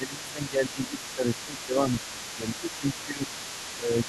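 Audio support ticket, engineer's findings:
Speech suppressed in double talk: talker dips at 0.0–0.97 s (deepest, about 15 dB down), 1.15–1.27 s, 1.45–3.24 s and 3.76–4.08 s (about 10 dB). Likely the echo canceller ducking everything while both ends talk, since it can't separate near speech from echo.

Other side's voice leaking through: far-end voice audible under the talker for the whole clip, 0.0–4.08 s, around 15 dB below. Likely the echo canceller not fully removing loudspeaker pickup from the mic, so residual echo rides along.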